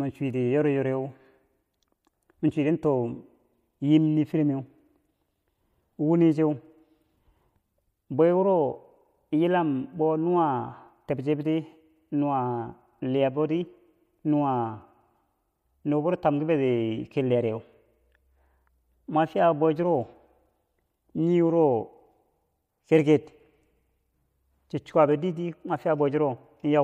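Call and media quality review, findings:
No audible faults found in the speech recording; no action required.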